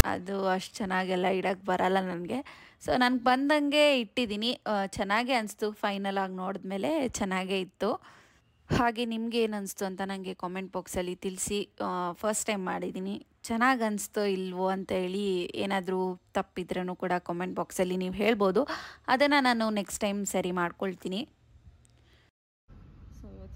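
A loud, harsh rasp, pushed off to one side and cut with hard edges, snaps past at 0.00 s, the very opening of the audio. It is file tags played as audio: a block of tag text was read as samples and reproduced as raw static.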